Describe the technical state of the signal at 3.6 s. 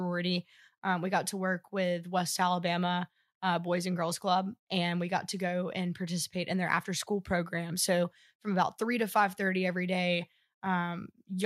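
At 3.6 s the speech signal is intact, with no audible fault at that moment.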